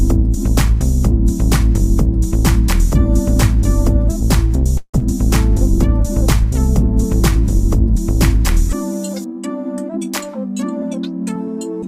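A likely long network dropout hits at 4.77 s: a run of packets never reached the receiver, so about 100 ms of material is simply missing. To cover the gap, the receiver extended the last sound it had for about 234 ms, which comes across as a fading buzzy tail, followed by about 60 ms of silence before the audio resumes at 5.03 s without the lost section. The recovery seems to have raised the playout delay by somewhere around 70 ms.

From 7.03 to 8.70 s the jitter buffer slows down. Running short of reserve, the receiver repeated small fragments over and over, adding about 45 ms of audio in total. That stretches the passage to 97% speed, so the sound drags slightly and becomes drawn out while its pitch stays put.

Between 10.20 and 10.32 s the jitter buffer speeds up the other way. Holding more audio than its target, the receiver cut out short pieces, roughly 40 ms in all, to trim the delay. 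For that brief stretch the audio plays at 128% speed, giving a sudden hurried lurch at unchanged pitch.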